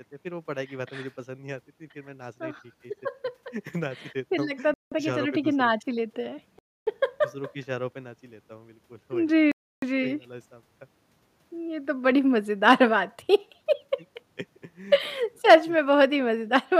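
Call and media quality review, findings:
Speech drops to clean silence at 4.74 s (about 0.18 s), 6.59 s (0.28 s) and 9.52 s (0.31 s), then resumes. Likely Bluetooth stall: delayed packets drained the headphone buffer. Dead silence rather than smeared or warbling concealment separates it from codec packet loss.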